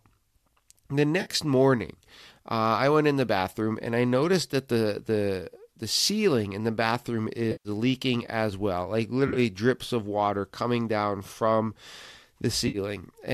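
Compressed audio frames went missing at four points, and each time the decoder filled the gap from the last good spectrum: AAC frame loss with concealment. At 1.21 s, just before "morning uh I went", about 50 ms is patched over as a brief smeared, noisy blur. The longest gap, about 130 ms at 7.52 s, falls between "ceiling in the bathroom" and "leaking as well like". Held that long, the concealment wears thin and the sound sags in level before recovering. At 9.28 s, before "drips of water coming", 60 ms of loss scatters across 80 ms in runs of around 30 ms, giving a flickery, phasey texture. At 12.68 s another 60 ms gap smears briefly. The gap lengths fit roughly 10 ms frames, likely from the low-delay AAC-ELD stream, whose light coding graininess carries through the patches.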